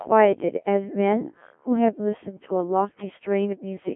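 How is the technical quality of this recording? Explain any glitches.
The technical quality is poor: the speech has passed through a Codec 2 vocoder for the whole clip, and the damage is heavy. The decoder rebuilds the voice from sine waves using only pitch, voicing, energy and a coarse spectral envelope, so the original waveform is gone. The result is robotic and buzzy, with detail smeared, and confined to a telephone-like band of about 200 Hz to 3.4 kHz. The harshness suggests a very low rate, around 1.3 kbit/s. A waveform codec at low bitrate smears and warbles the real signal instead. This sounds synthetic, as if a machine were speaking with the same pitch contour.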